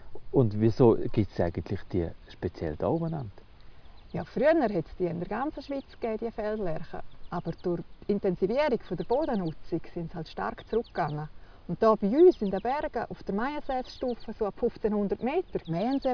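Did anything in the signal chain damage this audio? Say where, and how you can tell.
No, nothing stood out on listening that would point to damage at any stage of the signal chain.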